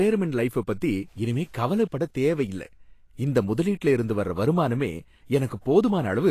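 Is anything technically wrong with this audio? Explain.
Yes. Throughout the speech the treble sounds hissy and grainy, with consonant attacks smeared and nothing above 14.2 kHz. This is likely Vorbis compression: a coarsely quantised treble residue is turned into noise-like texture over a lowered cut-off, which fits a bitrate near 37 kbps.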